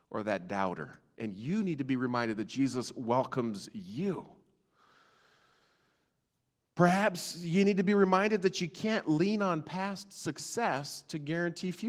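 No technical faults can be heard in the signal, which carries only the light traces expected of Opus voice compression running in hybrid mode at 20 kbps with its full bandwidth kept.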